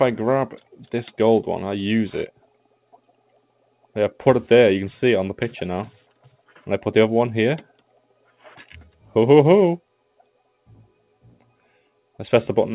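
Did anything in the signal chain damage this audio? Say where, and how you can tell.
Yes. The call processing stage damaged it: the noise suppressor misjudged part of the signal as noise and pulled its gain down. Between 6.23 and 6.65 s the level sags by up to about 11 dB, with roughly a fifth of a second audibly affected, so sustained or decaying sound there thins out or is cut short while sharper onsets survive. This happens through a narrowband call path whose content stops at 4 kHz, which fits G.711.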